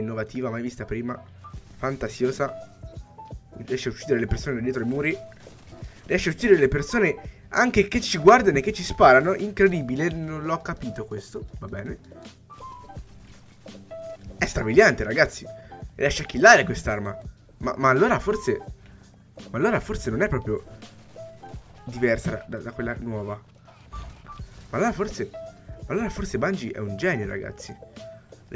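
No faults can be heard anywhere in this recording.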